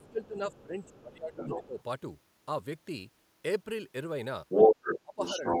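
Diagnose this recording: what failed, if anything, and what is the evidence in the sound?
Stage: call processing. From 0.0 to 1.79 s the talker's speech drops in level, up to about 20 dB at its deepest, across roughly one and a half seconds in all, and again from 5.02 to 5.54 s by about 25 dB. This is speech suppressed in double talk, likely from an echo canceller that turned down the near talker along with the echo. On a waveform the envelope caves in; on a spectrogram the harmonics fade or break into gaps.

The other side's voice leaking through is a second call-processing fault: a different voice underneath at 0.02–0.28, 0.52–0.63 and 0.82–1.01 s, faint at about 25 dB below the talker, stronger at 1.33–1.83 s, then louder than the talker at 4.49–5.01 s and 5.24–5.6 s. Loudspeaker pickup likely survived cancellation. A spectrogram shows a second, unrelated harmonic stack overlapping the first; the waveform shows energy where the talker is weak.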